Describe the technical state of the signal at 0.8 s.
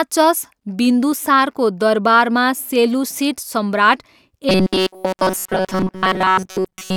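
At 0.8 s the speech signal is intact, with no dropout, clipping, glitch or other fault at that moment.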